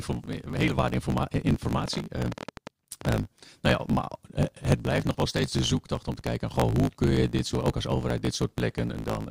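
Speech runs about 1.16 times too fast throughout, at roughly its normal pitch, with a steady 54.4 Hz buzz underneath. This is a block size mismatch (truncated). One stage writes blocks that fit 1024 samples, and the next reads a shorter span, so the tail of every block is discarded. On a waveform, small discontinuities repeat at every block boundary. On a spectrogram, a comb of harmonics sits at 54.4 Hz and its multiples, with vertical seams at the same spacing. From 1.88 to 3.06 s a train of clicks rides over the sound, and in pauses as well. There are about fifteen sharp ticks at an uneven pace averaging 11 per second, peaking around 10 dB above the speech. The waveform shows them as narrow, similar spikes, and the spectrogram shows them as thin full-height vertical lines. Electrical interference or a faulty connection or power supply is the likely cause.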